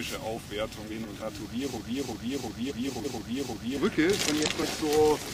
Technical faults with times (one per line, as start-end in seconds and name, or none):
0.86-1.23 frames out of order
1.77-3.77 broken-record loop
2.70-3.06 frames out of order
4.27-4.63 frames out of order